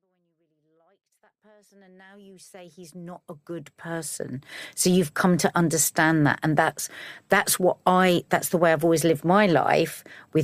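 The speech signal shows no technical faults; the smooth fade-in from the very beginning, reaching full level at about 4.7 s, is a deliberate edit with no click or hard edge.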